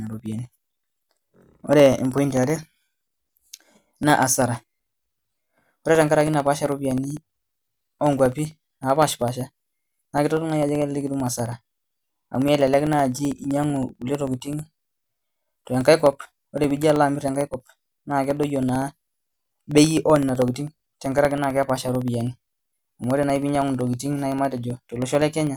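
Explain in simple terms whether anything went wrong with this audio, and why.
Periodic USB or driver dropouts run through the whole recording, from 0.07 s to 25.47 s. Every 64 ms, roughly fifteen times a second, about a millisecond of the speech goes missing and is replaced by silence. Something on the computer is briefly blocking the USB connection or audio driver on a fixed schedule, so the sound stream keeps getting cut. Hundreds of these tiny gaps make a steady ticking that sounds only while someone is talking.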